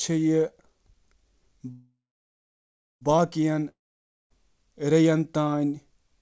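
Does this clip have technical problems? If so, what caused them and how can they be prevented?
Yes. A call audio freeze runs from 1.72 to 3.03 s: the last sound fades into 1.05 s of silence, then speech resumes intact but 1.3 s late, likely because delayed packets emptied the jitter buffer. A more adaptive jitter buffer and a less congested network path would prevent this.

A long network dropout from 3.69 to 4.32 s fades to 0.56 s of silence, and about 0.62 s of speech is lost, likely from sustained packet loss. Forward error correction, redundancy or a more reliable link would prevent it.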